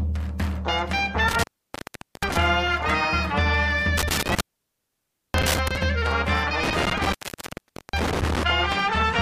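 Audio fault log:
1.28–2.37 s, 3.97–5.77 s, 6.63–8.43 s: intermittent contact. The sound drops out three times, for about 0.8 s, 0.94 s and 0.8 s. A loose connection breaks the signal path. Crackle marks each break and reconnection. Faint hiss fills the gaps.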